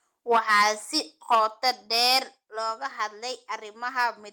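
A short speech clip with clipping and sudden level drops. Microphone overload is heard from 0.31 to 0.68 s and again from 1.31 to 2.19 s. The loudest syllables turn harsh and crackly. The peaks are pushed about 9 dB and about 10 dB past the converter's limit, with their tops flattened. The first burst has more of its samples cut, roughly a tenth, against a small share in the second. The likely cause is an input volume set too high for the converter. The microphone volume is also stepped down three times, at 0.36, 1.35 and 2.37 s. Each time the voice and the background drop together in one abrupt step, by about 2 dB, then about 5 dB, then about 5 dB again. The first two steps come just after distorted peaks begin. This likely reflects the call software lowering the device's input gain after detecting the overload.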